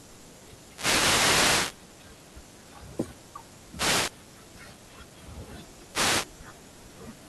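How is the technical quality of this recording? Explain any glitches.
The recording suffers from repeated wireless microphone noise hits, from 0.65 to 1.83 s, 3.70 to 4.15 s and 5.87 to 6.31 s. The radio link from the microphone fades as reflected signals cancel. Receiver noise then surges, heard as bursts of swishing static over the speech.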